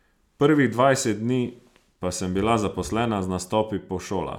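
No technical faults can be heard anywhere in the recording, with the speech signal arriving intact and continuous throughout.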